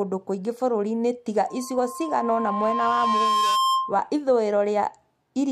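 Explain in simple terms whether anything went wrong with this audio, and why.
From 1.48 to 4.06 s a loudspeaker feedback squeal rises over the speech. The microphone hears its own speaker and re-amplifies one pitch, near 1.1 kHz. Unlike a steady whistle or hum, it swells over roughly two seconds until it is a bit louder than the speech.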